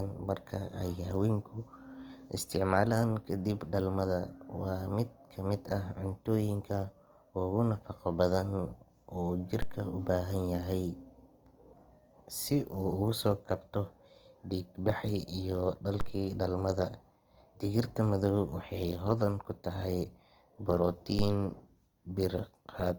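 Throughout the speech the texture is rough and grainy, with band energy held but fine detail replaced by folded or noise-like filler. That points to likely Opus compression in its music mode at a low rate, around 24 kbps, while keeping fullband reach up to 20.2 kHz.

At 9.62 s a DC step shifts the waveform's zero line, heard as a low thump while the speech continues unchanged. The offset lasts until 16.01 s. Another step at 21.19 s persists to the end.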